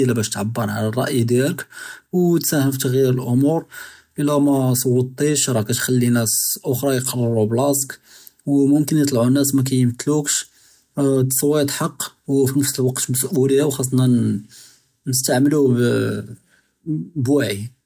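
No technical faults are audible.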